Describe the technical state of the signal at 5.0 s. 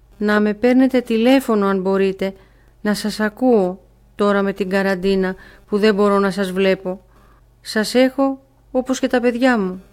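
At 5.0 s the signal is intact, with no audible dropout, distortion, noise burst or other technical fault.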